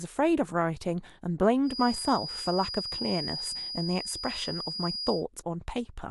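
From 1.62 s to 5.25 s, a feedback whistle sits behind the speech. It is a thin, steady tone near 4.9 kHz, about 10 dB below the speech. It swells and fades slowly in level. The likely cause is a loudspeaker-to-microphone loop held just short of runaway feedback.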